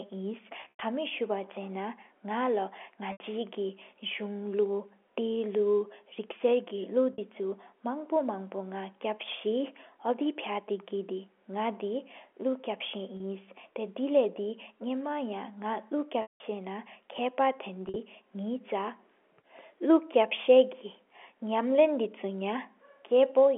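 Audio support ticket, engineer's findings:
Packet loss with pitch repetition at 0.61, 3.12, 7.13, 13.17, 16.22 and 17.86 s, 30 to 180 ms each. Concealment repeats the last pitch period, giving a buzzy hold that fades on longer gaps. G.711 band-limits audio to 300–3400 Hz.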